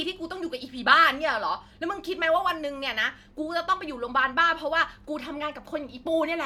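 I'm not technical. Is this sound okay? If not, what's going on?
Yes, no faults heard.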